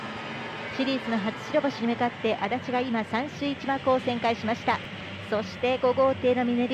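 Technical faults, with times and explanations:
4.84–4.87 s and 5.57–5.61 s, chunks out of order: in each spot a short block of about 11.6 ms, which fits a 512-sample buffer at 44.1 kHz, plays after material that should follow it. At 4.84 s the block is one chunk late; at 5.57 s it is two chunks late. No audio is lost, but the reshuffled order creates three abrupt joins per event, so each moment sounds briefly jumbled.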